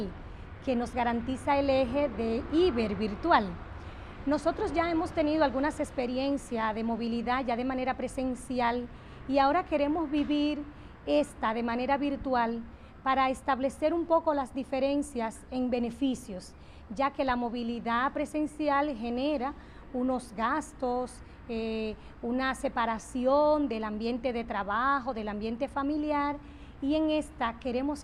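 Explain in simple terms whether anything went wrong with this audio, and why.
Nothing stood out as wrong when listening to this recording.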